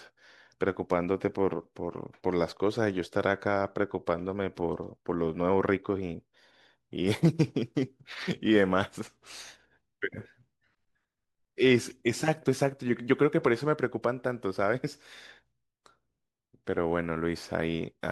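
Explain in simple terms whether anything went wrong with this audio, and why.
Nothing went wrong with this speech recording that a listener can pick out. At no moment does anything interrupt or disturb the sound, so there is nothing here to point to or explain.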